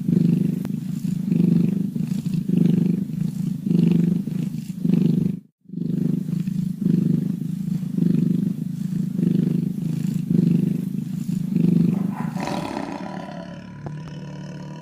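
A sudden voltage step or pulse, likely from a plug being seated, a switch, a static discharge or a driver glitch, enters the signal path near the end, between 13.87 and 14.10 s. The stages after it shape that pulse into a loud pop, heard here as two sharp pops in quick succession over about a quarter of a second, peaking roughly 5 dB above the surrounding audio, which carries on underneath them.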